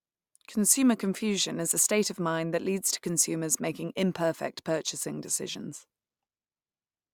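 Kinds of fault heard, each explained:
No kinds of fault are heard in this speech.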